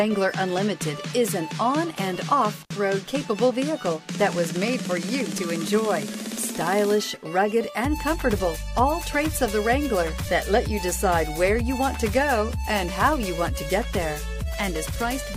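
At 2.62 to 2.71 s the sound drops out for about 56 ms with crackle at each edge, an intermittent contact where a loose cable or plug briefly opened.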